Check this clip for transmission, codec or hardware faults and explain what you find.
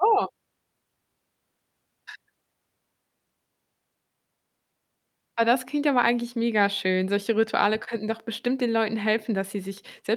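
The speech signal shows no transmission, codec or hardware faults anywhere in the recording.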